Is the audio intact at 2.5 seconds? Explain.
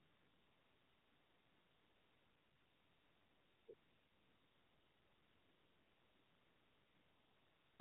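No. At 2.5 s you're inside a stretch of AMR comfort noise running from the start to about 3.68 s. The phone decided nobody was talking and stopped sending speech, so the receiver pads the gap with a smooth, steady synthetic hiss built from a rough level-and-spectrum sketch, not the real background.

On top of that, the whole clip carries the AMR narrowband mobile codec. Everything above 4 kHz is gone, and the vocal-tract model running on few bits gives the speech a plainly buzzy, synthetic edge, which fits a low mode around 7.4 kbps.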